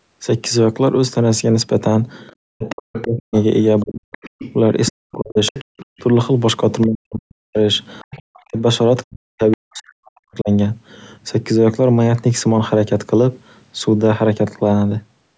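Other side's voice leaking through, from 2.27 to 3.21 s and 3.8 to 6.01 s, is a second voice about 15 dB under the speech. Brief scraps follow at 6.81 to 6.87 s, 8.11 to 8.17 s and 9.51 to 9.57 s, about 20 to 25 dB down. This is likely loudspeaker echo that the canceller left in the microphone signal.

Speech suppressed in double talk, from 2.53 to 5.78 s, 6.87 to 7.58 s and 8.16 to 10.5 s, makes the speech dip by as much as around 40 dB or drop out in pieces. The likely cause is the canceller turning everything down while both sides overlapped.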